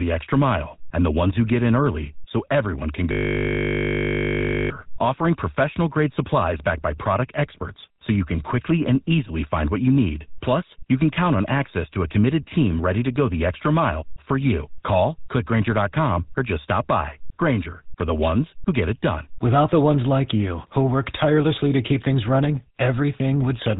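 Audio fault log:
throughout: GSM full-rate codec. The speech has the gravelly, buzzy roughness of the original GSM coder, plainly audible, with nothing above 4 kHz. It rebuilds the voice from a vocal-tract model fed by regularly spaced pulses, which fits a bitrate near 13 kbps.
3.12–4.70 s: system hang loop. The output freezes into a steady buzz at 50 Hz. The playback hardware kept cycling one 20 ms stretch of its ring buffer, repeated 79 times, while the system stalled and stopped supplying fresh audio.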